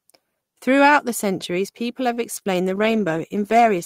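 At 2.13 s there's a short stall from a late packet. A packet missed its slot, the jitter buffer ran dry, and the receiver held the last bit of sound for about 34 ms until it turned up. Nothing's lost, but the sound hangs, and everything after runs 34 ms later.

Right after, at 2.39 s and again at 2.43 s, there are two back-to-back short concealed packet losses, each about 20 ms gone. The decoder extended the preceding sound to cover both gaps, so you hear a quick smear or wobble through roughly 2.39 to 2.47 s.

From 2.69 s to the end there's a call bitrate drop, from 32 kbps down to 14 kbps for the last 1.2 s or so. The encoder is coding much more coarsely and trimming the top end, so the speech turns rougher and duller.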